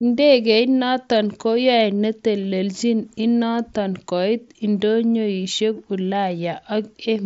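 There are no technical faults to describe in this speech clip.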